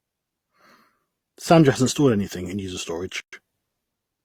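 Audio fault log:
3.20–3.33 s, gap at a join of encoded pieces: separately encoded segments were joined untrimmed, so leftover encoder delay and padding open a 125 ms silence after "stored anything in user" before the speech resumes.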